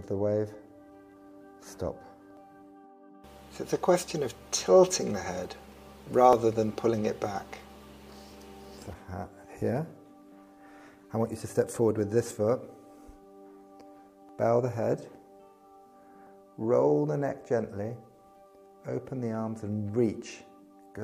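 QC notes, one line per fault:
2.37, 6.33, 8.32, 12.31, 14.29 and 16.27 s, overlap between stream segments: at each point a short stretch of sound, about 6 to 14 ms, is skipped and the waveform jumps, giving a tiny skip. The events land on boundaries of 2 s segments whose time stamps overlap, so the player trims sound that was never actually doubled. The skips fall on a 2 s grid, and no gap of silence is inserted, which sets this apart from a dropout.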